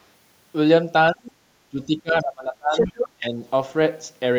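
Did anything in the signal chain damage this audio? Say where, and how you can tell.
Yes, the damage is in call processing. The speech is suppressed in double talk at 1.12–1.32 s, 1.71–2.95 s and 3.17–3.39 s. It drops by roughly 20 to 25 dB. The likely cause is an echo canceller that could not separate the talker from the far side and ducked both.

A second voice leaks through from the other side between 2.72 and 3.09 s. It is about as loud as the talker. This is likely residual loudspeaker echo that the canceller left in the microphone path.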